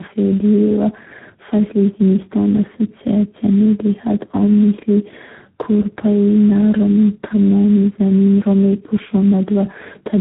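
This speech recording shows tandem speech coding throughout: the call evidently crossed several coded links, with the sound pointing to three low-rate speech codecs in a row, such as GSM full rate, AMR-NB and G.726, each recoding the previous one's damage. The speech comes out rough, muffled and warbly, with nothing above 3.9 kHz.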